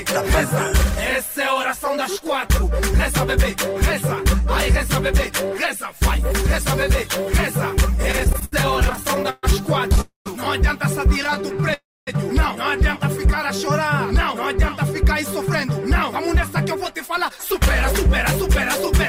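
From 8.03 to 9.99 s the audio stalls repeatedly, a stutter of 22 brief gaps, the longest 131 ms, filled with continued and fading copies of the preceding sound. Packets reached the jitter buffer late, so it kept running dry. On a spectrogram, smeared vertical bands interrupt the texture.

At 10.01 s the sound holds as a buzz that fades to silence for about 130 ms before resuming at 10.28 s. This call audio freeze likely comes from packets held up in transit, inserting 247 ms of delay. The waveform shows a decaying tail, then a flat line.

A lighter stutter follows from 11.24 to 11.72 s, with eight gaps of at most 13 ms appearing as thin repeated slivers. At 11.74 s a second freeze sustains and fades, then goes silent for about 250 ms, adding 331 ms before the sound continues at 12.09 s.

From 16.19 to 18.96 s a jitter buffer speed-up runs the audio at 102% speed, trimming about 50 ms in tiny pitch-period slices to drain excess buffered delay. 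Pitch stays put while the timing runs only slightly fast, short of sounding hurried. Spectrogram harmonics keep their height but events crowd closer together.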